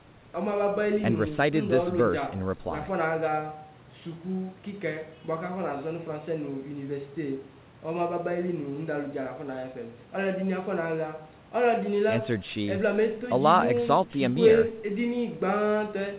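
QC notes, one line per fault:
No faults found.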